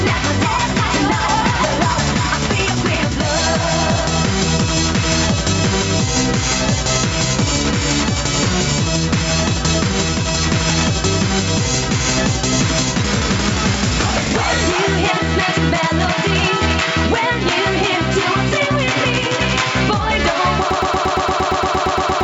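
From 20.71 s to the end, a broken-record loop repeats one 115 ms fragment 13 times, likely a stalled stream; the waveform shows identical tiled blocks.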